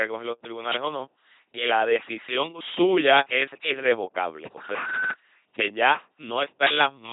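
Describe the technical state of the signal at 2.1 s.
At 2.1 s the speech is coming through an LPC-10 vocoder, which affects the whole clip rather than one moment. The voice is rebuilt from a short all-pole vocal tract model driven by either a pulse buzz or noise, giving a heavy mechanical robot timbre with nothing above 3.9 kHz, consistent with a 2.4 kbit/s coder. Unlike plain band-limiting, the natural voice texture itself is replaced by that buzz-or-hiss excitation.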